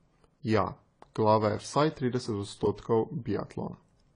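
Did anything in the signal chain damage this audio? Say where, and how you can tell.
Yes. The damage sits at the codec stage and runs through the whole clip. Nothing is present above 10 kHz, so the top of the speech sounds dull and closed in. The texture is smeared, with a warbling, fizzy edge on sibilants and held sounds. That points to AAC compression, likely AAC-LC at a low bitrate near 24 kbps. With too few bits, the encoder lowered its cut-off and coarsely quantised the remaining frequency bands.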